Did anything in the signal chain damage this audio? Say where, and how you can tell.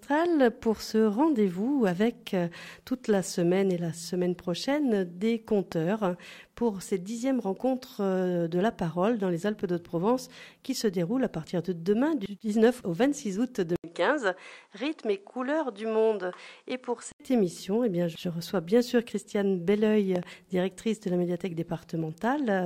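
Yes. Two loud pops come from the analogue wiring stage. A single pop at 5.72 to 5.74 s and a double pop at 20.16 to 20.25 s each peak at roughly 10 dB above the programme, while the sound continues underneath. Each is a sharp step in voltage, likely from a plug, switch or static discharge. The following circuitry shapes it into a short thump, and the second event lands as two quick hits.

From 13.76 to 17.20 s the input switched to a poorer device. At the change there is a gap of about 80 ms. After it, the content drops roughly 5 dB and loses everything above 10.5 kHz, so the tone turns dull. A new noise floor sits roughly 45 dB below the signal. This points to a driver-level change of capture device, likely to another microphone or a headset call profile, before the original input returns.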